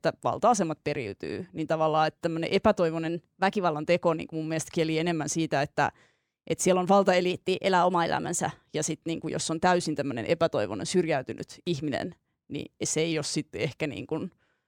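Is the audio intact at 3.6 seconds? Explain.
No. From 3.09 to 3.74 s, just after "tavallaan että tämmöinen", the speech runs about 6.2% fast and sits roughly 104 cents, a little over a semitone, sharp, then snaps back to normal. This is most likely a drift correction step, where clock-matching software briefly raised the playback rate to rebalance its buffer. Unlike wow or flutter, the pitch doesn't waver. It jumps up, holds steady, and drops back in single steps, with speed and pitch moving together.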